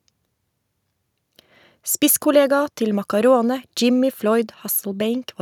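No dropouts, clicks, distortion or other faults turn up anywhere in the recording.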